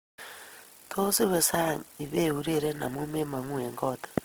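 Speech runs throughout with plainly audible Opus compression damage. The band energy stays intact and the spectrum reaches about 20.3 kHz, so there are few of the swirling, watery holes that MP3 leaves. Instead, the sound turns rough, grainy and noise-filled, as if bands were patched with folded or synthetic content. That points to Opus's music (CELT) mode rather than its muffled, hoarse speech mode, and the likely cause is encoding at around 16 kbps.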